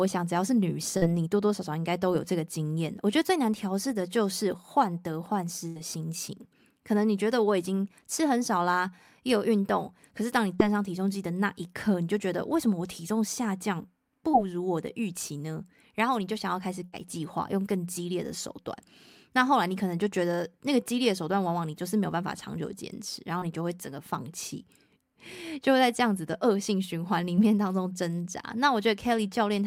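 At 0.97 to 1.04 s the speech briefly smears or wobbles, as though a sliver of sound were stretched over a gap. This is short concealed packet loss. About 40 ms of audio never arrived in time, and the receiver covered the hole by extending the preceding sound before blending back into the real signal. The same brief smear recurs at 10.55 to 10.61 s, also covering about 40 ms. Shorter ones covering about 20 ms follow at 14.31 to 14.35 s, 23.39 to 23.44 s and 27.36 to 27.39 s.

At 5.68 to 5.77 s, and again at 16.85 to 16.95 s, the sound turns into a held buzz or a fading hiss for roughly 80 ms and then picks up further along, with the audio in between gone. Each is a burst of packet loss. A run of packets was lost or came too late. The receiver kept extending the last sound while turning it down, and about 80 ms of speech is missing each time.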